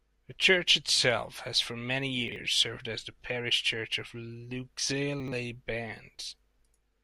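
At 2.28 to 2.36 s, between "itself has for many" and "served as the parish", a 40 ms chunk plays one slot late, and at 5.2 to 5.32 s another 40 ms chunk lands two slots late. These chunks out of order scramble the sound briefly at the hard joins. Unlike a dropout, no audio is missing.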